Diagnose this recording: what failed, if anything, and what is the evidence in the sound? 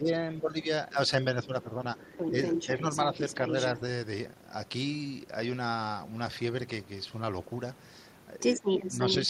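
Speech suppressed in double talk, at the call-processing stage. From 0.0 to 2.17 s the talker's level dips, by about 10 dB at worst and for about a second in total. From 8.6 to 9.29 s there is a shorter, shallower dip of about 5 dB. The likely cause is an echo canceller that could not separate near-end speech from loudspeaker echo while both sides talked, so it attenuated everything.

The other side's voice leaking through, also in call processing. A second voice sits under the talker from 1.97 to 3.8 s at about 5 dB below it, and from 8.4 s to the end at roughly equal level. This is likely loudspeaker echo that the canceller left in the microphone signal.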